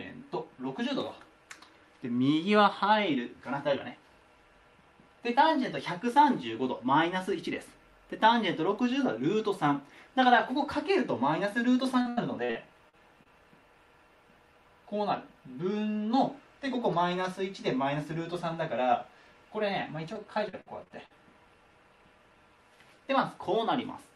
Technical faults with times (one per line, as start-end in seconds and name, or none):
12.01-13.27 repeated packet loss (robotic sound)
20.13-21.12 repeated packet loss (robotic sound)